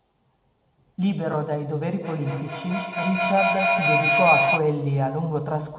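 From 2.01 s to 4.67 s a feedback howl builds in the speech. Two devices in the same room are sharing the call, and each trip from loudspeaker back into microphone adds level, so the sound narrows to a shrill tone of around 3 kHz, inside the narrow telephone band, with the loop repeating roughly every fifth of a second and peaking about 2 dB above the speech. Unlike echo, whose repeats fade, these grow until the loop is broken.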